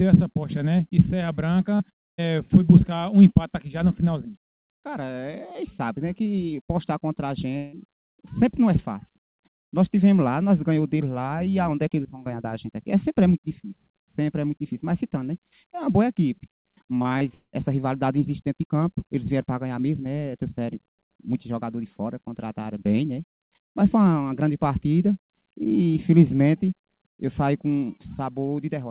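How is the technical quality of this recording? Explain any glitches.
The recording has three network glitches, and the band stops at 4 kHz, which fits a G.711 mu-law call codec at 64 kbps.

Repeated packet loss (robotic sound) occurs at 1.76–2.29 s and 16.99–17.55 s. Successive gaps, up to 130 ms and 190 ms long, get patched by stretching prior sound, making choppy fragments.

A long network dropout is the likely cause at 7.57–7.75 s. About 160 ms was never received, and the sound was continued as a fading buzz or hiss rather than silence.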